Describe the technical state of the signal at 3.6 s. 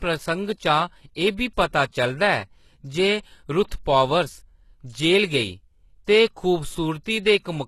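HE-AAC compression is audible at 3.6 s, as throughout the speech. Likely a low-bitrate coder, around 16 kbps, rebuilt the treble by copying lower bands upward. The band stops near 12.3 kHz, and s sounds come out gritty and metallic.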